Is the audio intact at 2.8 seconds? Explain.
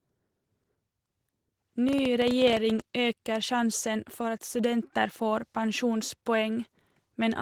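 No. At 2.8 s a train of clicks is just ending. It is likely caused by interference from nearby equipment or a struggling interface injecting pulses. From 1.89 to 2.81 s, roughly fifteen similar clicks arrive unevenly, about 14 per second, peaking around 10 dB above the speech. They are heard as ragged popping.

Opus voice compression also runs through the whole clip, including this moment. The speech is squeezed into a low-rate linear-prediction coder with a thin layer above 8 kHz, which fits about 16 kbps. The excitation is coded coarsely, so the speech sounds muffled, hoarse and slightly robotic.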